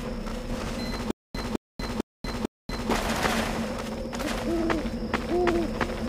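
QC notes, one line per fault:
1.11–2.90 s, stutter with silent gaps: a 212 ms burst repeats four times, with 236 ms of dead silence between, likely a stalled stream replaying its last fragment.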